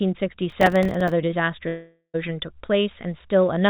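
From 0.50 to 1.12 s, processor overload crackle: around twenty missed buffers of a few milliseconds each leave tiny silent holes, heard as gritty tearing over continuing speech rather than a gap. From 1.68 to 2.16 s, the audio turns into a fading buzz, about 0.46 s filled in all and ending in roughly 90 ms of silence before speech resumes with that stretch missing. This is likely a long network dropout, one continuous loss rather than scattered holes, heard through the G.711 call path with nothing above 4 kHz.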